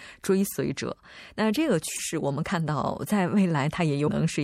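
Throughout, the speech likely went through MP3 compression at a bitrate that fits 64 kbps, which leaves a watery, swirly haze. Damaged data in a compressed stream made the decoder lose sync from 1.95 to 1.99 s and again at 4.07 s, each a brief disruption.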